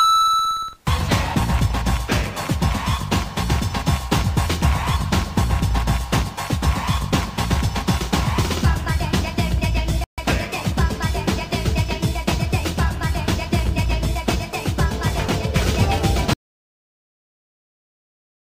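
An audio dropout to silence begins at 16.34 s and runs to the end of the clip, about 2.2 s in all. The sound stops abruptly in mid-flow, and what follows is silence with no room tone or background hiss underneath. That points to the input feed being lost while recording carried on writing silence, most likely from a disconnected device, a broken link or a mute. Whatever happened during those final seconds is not recoverable.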